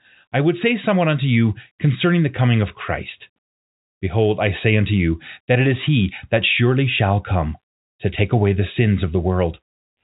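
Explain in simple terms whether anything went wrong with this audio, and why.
Nothing went wrong: the speech has the narrow, phone-line sound of standard G.711 telephone coding, which lets nothing above 4 kHz through, and no faults can be heard anywhere in the recording.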